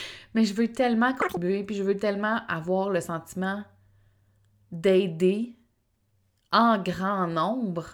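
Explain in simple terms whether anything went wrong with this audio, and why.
Right after "je veux tellement", from 1.22 to 1.37 s, there's a short burst of audio read two samples at a time (double speed). The player grabbed pairs of samples as single steps, so the speech rushes by twice as fast and an octave higher, before "puis je veux tellement".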